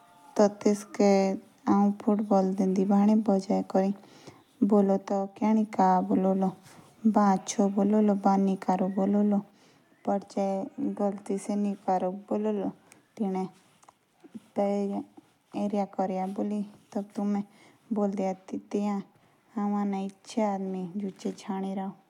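At 5.08 s the speech suddenly drops about 6 dB. It recovers at 5.44 s. At 9.51 s it drops again by about 6 dB and stays down until the end. Both steps are abrupt, with no fade. The likely cause is one channel drops out. One stereo channel is lost, so after the mono sum the sound shared by both channels falls by half. Anything carried only in that channel vanishes too.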